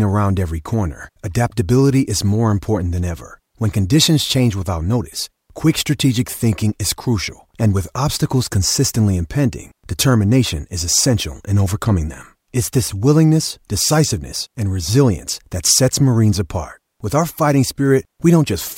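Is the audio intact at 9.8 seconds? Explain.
Yes, at 9.8 seconds the audio is intact, with no dropout, click, distortion or other fault audible at that moment.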